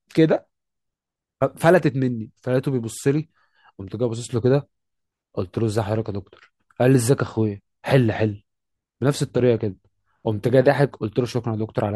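Nothing in this recording stands out as a technical fault; there's simply nothing to point to here.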